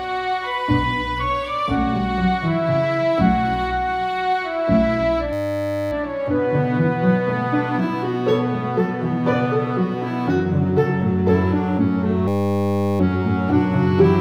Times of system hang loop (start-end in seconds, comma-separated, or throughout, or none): 5.33-5.92, 12.28-13.00